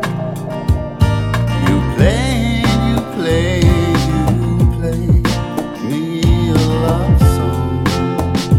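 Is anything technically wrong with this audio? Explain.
No, nothing technically wrong can be heard in this audio. There are no dropouts, glitches or distortion anywhere in the recording.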